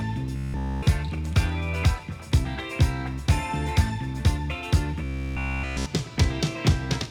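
Robotic sound from repeated short buffers occurs from 0.36 to 0.87 s and again from 5.04 to 5.86 s. The sound becomes a rigid, metallic buzz at 66.8 Hz, almost entirely made of repeats, likely from one roughly 15 ms buffer being replayed while fresh audio failed to arrive.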